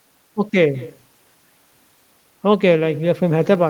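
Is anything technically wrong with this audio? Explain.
Yes. Throughout the speech, every phrase is trailed by a faint, thin copy of itself arriving about a fifth of a second later, sitting about 21 dB below the direct sound. This is echo with no canceller: the far end is playing the call through a loudspeaker, its microphone picks that playback up, and nothing subtracts it before it is sent back, so the talker's own voice returns after the network round trip.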